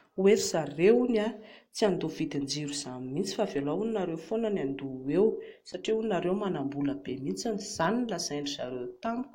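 No technical faults can be heard anywhere in the speech. There is nothing in the recording that calls for a timestamp or a fault description.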